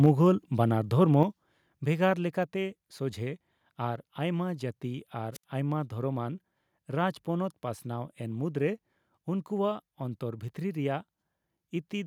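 A harsh, crackling edge sits on the sound from 0.04 to 0.06 s, where peaks flatten against the converter's limit and a few percent of the samples are squared off. This is likely microphone overload: the input gain was set high enough that the loudest peaks ran into the converter's ceiling and lost their tops.

Right after that crackle, at 0.06 s, the whole level drops by about 3 dB, and it falls again at 1.23 s, this time by about 6 dB, with the background sinking along with the foreground each time. This is likely the microphone volume being stepped down by the call software, which reacted to the overloaded input by cutting the device gain in discrete steps.

At 5.33 s hiss briefly swells, then the audio falls into a hole of near silence lasting about 70 ms before returning by 5.44 s. This is a wireless microphone squelch dropout: the FM radio link faded until the receiver's squelch gated the output shut, reopening once the signal recovered.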